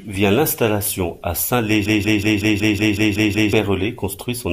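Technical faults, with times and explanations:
1.86–3.53 s: system hang loop. The speech stops moving forward and one short slice, about 186 ms long, repeats exactly nine times. It comes round about 5.4 times per second, so it sounds like a rapid machine-gun stutter rather than a steady buzz. The driver or computer froze, but the sound hardware kept replaying the same ring buffer. The loop length fits an 8192-sample buffer. About a second and a half of the real audio is lost.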